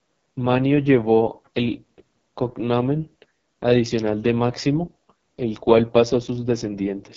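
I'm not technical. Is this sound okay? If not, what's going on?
No. The speech sounds rough, raspy and somewhat muffled from start to finish, with nothing above 7.7 kHz. This is heavy damage from the AMR wideband (HD Voice) codec, a phone-call compression that rebuilds speech from a simplified model, here squeezed to one of its lowest settings.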